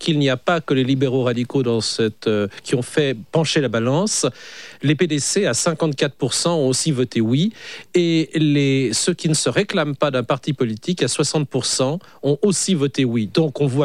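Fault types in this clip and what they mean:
No technical faults turn up anywhere in this clip. Nothing calls for a fault type or an explanation.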